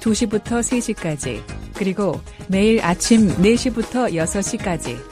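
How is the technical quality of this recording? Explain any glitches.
There is one glitch. From 2.88 to 3.44 s, a sudden gain jump raises the sound and its background noise together by about 5 dB, likely from gain applied instantly without a ramp.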